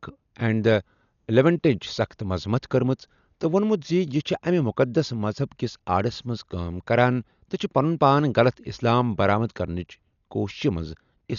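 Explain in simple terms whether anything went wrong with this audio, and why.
Dolby Digital compression heavily damages the speech from start to finish, and is likely what makes it sound dull and muffled. Squeezed into too little data, the encoder dropped everything above 6.9 kHz, and the decoder filled missing detail with rough, fluttering noise.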